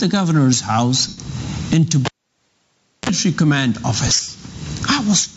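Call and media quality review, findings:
Gain pumping throughout, likely an input gain set too high with a fast limiter riding it. Around 25 dB gain swing. Waveform flattened, little dynamic range.

Lost LE Audio frames, 1.08–1.18 s (about 98 ms, fits thirteen 7.5 ms frames) and 4.07–4.28 s (about 128 ms lost, scattered over 210 ms, longest run about 70 ms). LC3 concealment repeats the last spectrum with randomised phase. Tones smear to hiss, fading. Spectrogram: harmonic lines dissolve into broadband blur.

Cable pulled and plugged in, 2.05–3.09 s. Pop at 2.05 s, then near silence for about 0.99 s, a 36 ms burst of 60 Hz mains buzz as the tip touches, and a second pop at 3.09 s. Waveform: two spikes bracketing a flat stretch. Spectrogram: vertical broadband lines at each end, a short band of 60 Hz and harmonics just before reconnection, all below the call path's 8 kHz ceiling.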